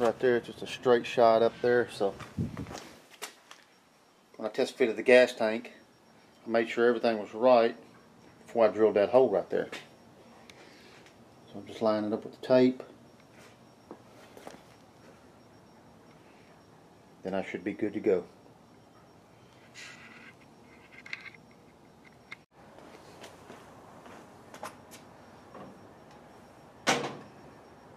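No technical faults are audible.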